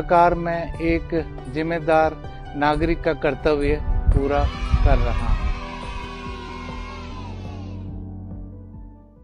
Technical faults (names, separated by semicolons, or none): damaged data in a compressed stream